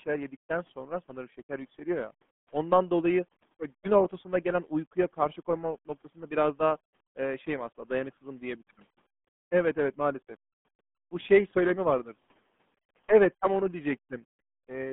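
From start to end, the speech carries the sound of the RealAudio 14.4 codec. Nothing above about 3.7 kHz survives, and the band sits near 150 Hz to 3.5 kHz. Heavy coding damage leaves it muffled and gargly, which fits an 8 kbit/s speech codec.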